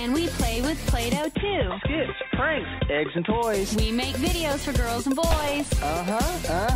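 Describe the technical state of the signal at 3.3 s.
At 3.3 s the signal is still inside a stretch from 1.35 to 3.43 s where the input likely switched to a poorer device, such as a second microphone or a headset's call profile. That capture path passes nothing above about 3.8 kHz, so the sound turns dull and boxy, with a faint new noise floor well below the signal. The change comes with no gap at the switch and little shift in level.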